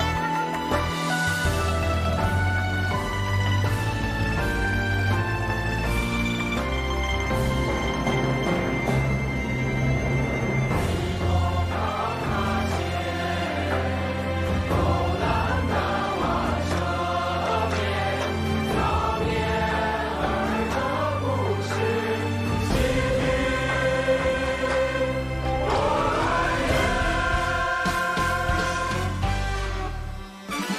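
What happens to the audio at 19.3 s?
At 19.3 s a steady USB whine sits under the audio, as it does throughout: fixed tones at 1 kHz and strongest at 8 kHz, about 35 dB below the signal, leaking from bus power frames rather than low mains-hum frequencies.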